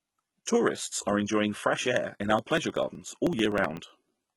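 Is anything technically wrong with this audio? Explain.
Yes, two things. Throughout the speech, the top end sounds synthetic: sibilants come out gritty and a bit lispy, with a metallic sheen, and there's nothing at all above about 11.8 kHz. That's likely HE-AAC compression, at a very low rate that fits something like 16 kbps. The codec keeps only the lower spectrum and rebuilds the treble by copying lower bands upward under a coarse envelope, so the harmonics up there don't line up with the real ones.

Then from about 2.39 s to 4.27 s there are periodic USB or driver dropouts: small losses of roughly a millisecond, evenly spaced every 0.063 s, so around thirty of them. Each time, a background task stalls the USB bus or audio driver and a sliver of audio is skipped outright rather than filled with silence. You hear it as a steady run of ticks riding on the speech, about sixteen per second.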